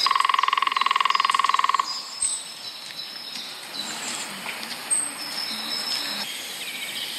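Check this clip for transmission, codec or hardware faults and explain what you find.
No transmission, codec or hardware faults turn up anywhere in this clip.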